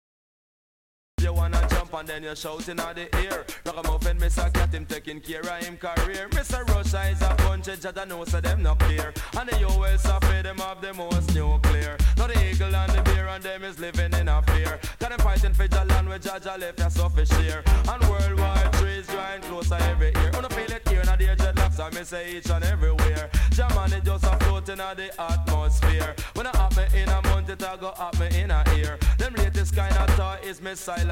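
The audio has a cut-off start. Digital silence runs from 0 to 1.18 s. At 1.18 s the sound enters abruptly, already in progress, with no natural attack or fade-in. The recording or stream began late and caught the sound midway.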